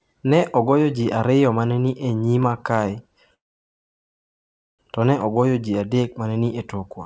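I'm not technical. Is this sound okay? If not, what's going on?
No. Dropped samples occur at 2.43 s, just before "kae to ne ogoyo", and at 5.21 s, just before "ogoyo ji adek ma". Each is a single sharp click. A tiny sliver of the recording, well under a millisecond, went missing, so the sound jumps abruptly and no speech is lost. The likely cause is a brief hiccup in the audio stream.

A call audio freeze runs from 3.34 s to 4.81 s, ending just before "to ne ogoyo ji". For nearly one and a half seconds the sound stops and stays almost entirely silent, then picks up where it left off, so nothing is missing and everything afterwards simply arrives late. The likely cause is that the call's data was held up on the way and the receiving side ran out of sound to play. The call line itself carries nothing above 8 kHz, so the highest frequencies are cut off.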